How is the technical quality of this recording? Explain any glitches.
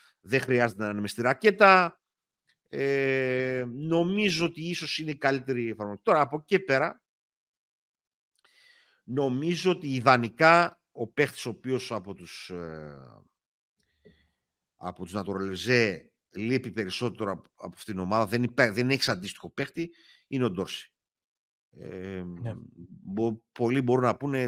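No glitches to report: the speech recording shows no audible technical faults at any point.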